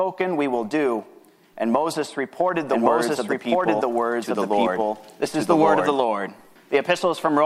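From about 2.69 s to 5.95 s the audio has a doubled audio track: a second, full-band copy of the same sound runs roughly a second behind the original and at about the same loudness, so everything seems to repeat on top of itself. The copy has no decay or room colour and it switches in and out abruptly at both ends. That's likely a second capture through a slower path, or an edit leaving two copies out of step.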